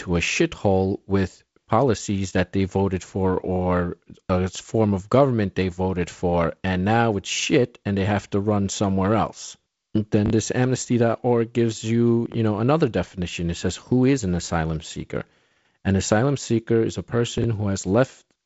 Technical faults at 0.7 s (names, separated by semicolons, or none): none